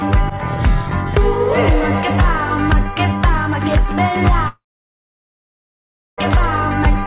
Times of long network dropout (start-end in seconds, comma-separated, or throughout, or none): 4.48-6.19